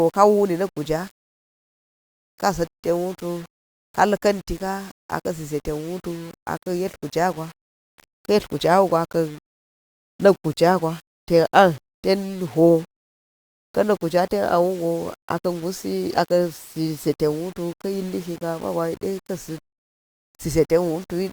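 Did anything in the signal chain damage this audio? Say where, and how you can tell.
Yes. The damage sits at a sample-format conversion, and it runs through the whole speech clip. The sound carries a grainy distortion that rises and falls with the voice. It is not a steady hiss. Quiet passages turn gritty, and the softest tails sputter or drop to silence. This is low bit depth without dither. The likely cause is rounding to about 7 bits, with no dither added. The error then tracks the signal, sitting only about 25 dB below it.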